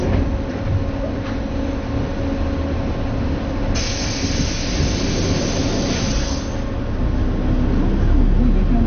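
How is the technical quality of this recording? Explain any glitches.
The technical quality is poor, with one fault running throughout. The likely cause is MP2 compression at too low a rate, consistent with about 48 kbps: upper sub-bands get no bits, so nothing sounds above 6.5 kHz, leaving it dull, gurgling and granular.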